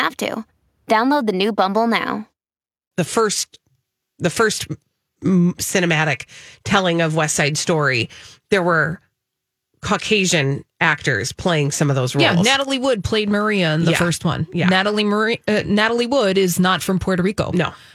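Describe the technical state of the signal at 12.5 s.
At 12.5 s the speech signal is intact, with no fault audible at that moment.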